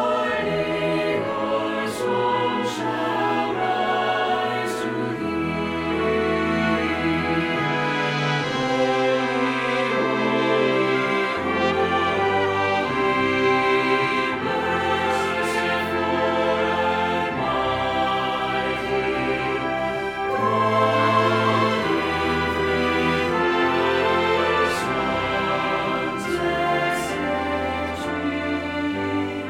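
No technical faults can be heard anywhere in this clip. There is nothing in the audio that calls for a timestamp or a closer look.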